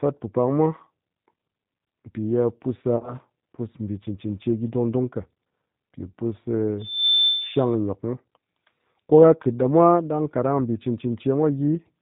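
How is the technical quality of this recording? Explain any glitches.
The recording is narrowband speech with audible coding damage throughout and one brief glitch.

G.729 codec: the audio has been through the G.729A speech codec, whose low-rate sound points to an 8 kbit/s stream. It rebuilds the speech from a filter model and a few pulses per frame and cuts everything above 4 kHz, so the speech sounds muffled, slightly rough and synthetic.

VoIP packet loss concealed by the speech codec: from 2.96 to 3.16 s, packets went missing, about 60 ms in total scattered over 80 ms, with no single gap longer than 20 ms. The decoder filled the gaps by extending its last pitch and filter settings, so the speech is briefly stretched into a buzzy tone or coloured noise, then sounds weak or distorted until the decoder recovers.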